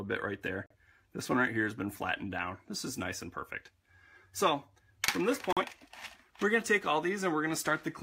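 You get two short digital broadcast dropouts, at 0.66 to 0.75 s and 5.53 to 5.63 s. Each time the sound cuts to silence for about a tenth of a second while the receiver mutes on a bad frame, which fits losing one roughly 43 ms frame.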